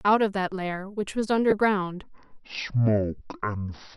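At 1.50 to 1.53 s, lost LE Audio frames leave a gap of about 15 ms, which fits two 7.5 ms LC3 frames. The decoder fills it by repeating the last spectrum with scrambled phase, so the speech briefly turns into a short noisy smear.

From 2.03 s to the end, the section at the wrong speed plays at 0.515 times normal speed. Pitch drops with it, roughly ten semitones, so the speech sounds deep and drawn out. The likely cause is the passage being resampled against the wrong clock.

Within that slowed section, at 3.18 to 3.21 s, a second run of lost LE Audio frames removes about 30 ms, consistent with four frames. The concealment again smears the sound into noise.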